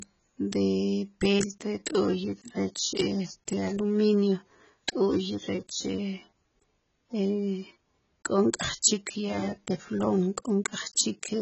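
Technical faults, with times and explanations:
Throughout, AAC compression: the speech sounds dull, smeared and warbly, with fizzy sibilants. This points to heavy, likely low-bitrate AAC-LC coding, around 16 kbps. A spectrogram shows a hard ceiling at 8 kHz.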